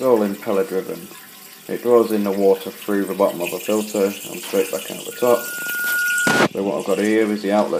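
The audio carries a loudspeaker feedback squeal from 5.11 s to 6.47 s. A single 1.4 kHz tone swells over under a second until it is about as loud as the sound itself. A microphone is picking up its own loudspeaker, and the loop gain at that frequency exceeds one.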